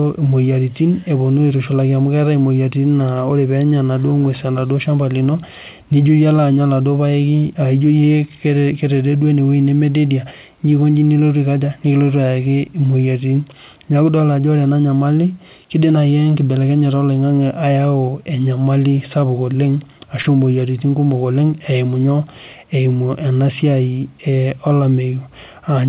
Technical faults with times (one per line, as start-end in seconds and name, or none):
20.22-20.26 short concealed packet loss